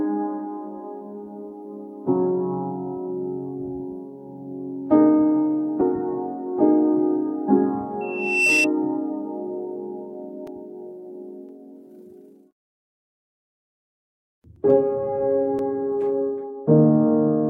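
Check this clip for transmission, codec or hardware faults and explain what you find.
Three faults are audible: a frame skip, a feedback squeal and a run of periodic dropouts.

At 5.81 s, compressed frames are skipped. About two 32 ms frames, roughly 70 ms of audio, never reach the output because they were missing or rejected as damaged. The sound jumps forward, leaving a brief blip or click at the join.

From 8.01 to 8.68 s, there is loudspeaker feedback squeal. A microphone picks up its own loudspeaker, and at 2.7 kHz the loop gain exceeds one. That tone swells over about 0.4 s into a squeal roughly 5 dB above the surrounding sound.

From 10.47 to 15.59 s, there are periodic USB or driver dropouts, every 1.024 s, about seven in all. A background task stalls the USB bus or audio driver, and each time a few milliseconds of audio are replaced by silence. They come through as evenly spaced ticks wherever sound is present.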